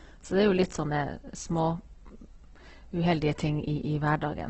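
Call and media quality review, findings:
Opus compression, throughout. Speech grainy, rough and noisy-textured. Nothing above 8.2 kHz, so wideband. Likely cause: CELT mode starved of bits, fitting a rate near 12 kbps, filling bands with folded or noise content instead of leaving holes.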